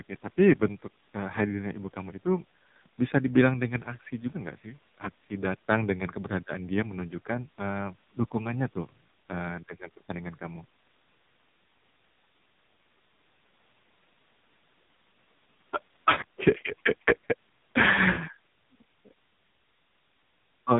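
Throughout, the AMR narrowband mobile codec leaves the speech band-limited below 4 kHz and heavily buzzy and synthetic, which fits a low mode near 5.9 kbps, unlike plain low-pass filtering.

From 5.70 to 5.75 s, a harsh crackle on the peaks is likely microphone overload, peaks about 4 dB over the limit with a few percent of samples flattened, distinct from codec buzz.

From 18.12 to 18.18 s, lost AMR speech frames leave a 40 ms dip where the decoder stretches the last sound with falling gain. That fits two 20 ms frames and sounds like a brief dip rather than a hard dropout.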